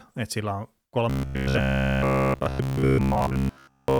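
From 1.10 s to 3.99 s the speech turns into a rigid, metallic buzz at 66.8 Hz. This robotic sound most likely comes from repeated short buffers, with a roughly 15 ms chunk replayed throughout. On a spectrogram it shows as evenly spaced vertical striations.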